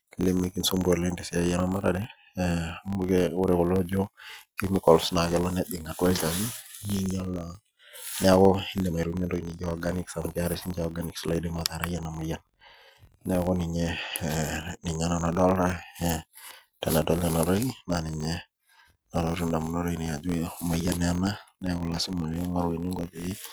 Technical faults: filter restarted on every block

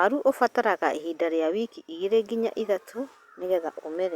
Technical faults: none

